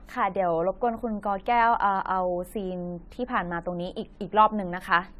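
Generation loss runs through the whole speech clip: the sound is swirly, smeared and hollow, with consonant attacks blurred. This is likely from repeated lossy re-encoding, around seven passes through a codec whose character points to AAC-LC at about 64 kbit/s. Each decode and re-encode quantised the signal again on a shifted frame grid, so the noise and spectral holes from every pass piled up into a degradation worse than one encode at that rate would give.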